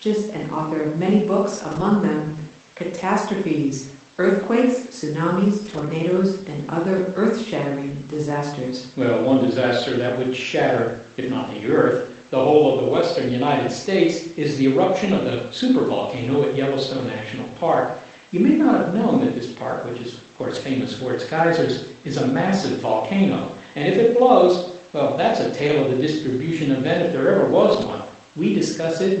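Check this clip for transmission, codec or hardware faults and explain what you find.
The speech has seven brief rough patches where lost packets were rebuilt from error correction. The call path itself runs through Opus, with audio band-limited to about 8 kHz at a setting that fits roughly 24 kbps, which gives it a coded haze.

The rebuilt patches fall at 1.71–1.81 s (right after "author of many books"), 4.75–4.77 s, 5.65–5.87 s, 6.97–6.99 s, 20.51–20.57 s, 25.67–25.73 s (between "blows well that's a" and "of the distribution event"), and 27.73–27.91 s (after "event if there ever"). They last 20 to 120 ms. The longest, at 5.65 s, fits about six lost 20 ms packets.

Each time a packet went missing, the following packet carried a low-bitrate backup copy, and the decoder played that copy instead. The speech continues unbroken but turns grainier and noisier for those frames. This is what separates it from plain loss concealment. 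In concealment the decoder has no data and extrapolates, which smears or buzzes the sound. Here the real content is still there, just coarser.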